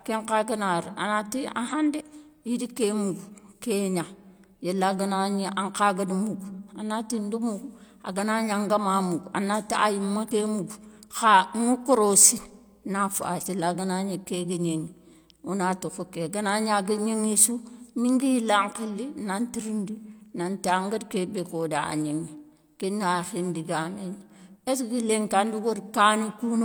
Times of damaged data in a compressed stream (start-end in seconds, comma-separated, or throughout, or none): 1.68-1.73, 10.27-10.31, 13.42-13.47